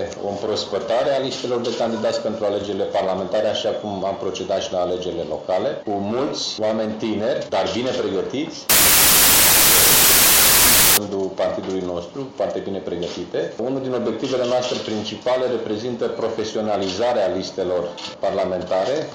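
Wrong sample width from 8.70 to 10.97 s. The audio points to 32-bit integer samples being read back as packed 24-bit ones, so each value is assembled from three bytes that straddle the true sample boundaries. Only some of these reads land on the real sample's top bits. The rest are garbage, heard as a loud noise bed with the actual sound buried beneath it, running at 0.75 times speed and correspondingly lower in pitch.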